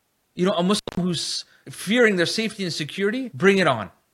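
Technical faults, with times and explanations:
0.77–0.97 s, intermittent contact: a loose connection opens for about 179 ms, dropping the signal to faint hiss, with crackle spikes at both edges; the waveform shows a flat gap.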